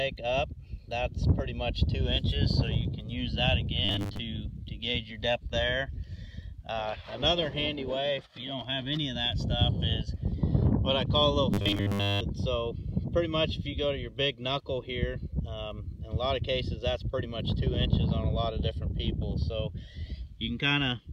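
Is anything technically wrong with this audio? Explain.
Yes, robotic sound from repeated short buffers occurs from 3.85 to 4.19 s and 11.54 to 12.22 s. New audio likely arrived too slowly, so roughly 10 ms chunks were looped for most of each stretch, imposing a rigid, metallic 100 Hz buzz.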